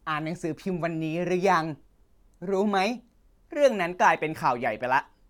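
Speech recording with no technical faults detected anywhere in the clip.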